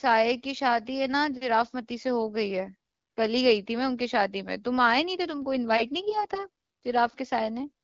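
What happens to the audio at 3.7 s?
Nothing goes wrong at 3.7 s; the speech there runs on intact, carried through the AMR wideband (HD Voice) codec at 12.65 kbit/s with only its light coding colour.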